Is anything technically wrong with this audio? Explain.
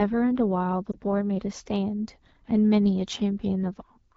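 Yes, two faults are audible. Throughout, the AMR wideband (HD Voice) codec sounds rough and raspy. Its pulse-driven vocal tract model is starved of bits, which fits the low 8.85 kbit/s mode. Lost AMR speech frames occur from 0.92 to 0.97 s, heard as a brief dip or warble where the decoder reused the previous pitch and vocal tract settings at reduced gain, consistent with a single missing 20 ms frame.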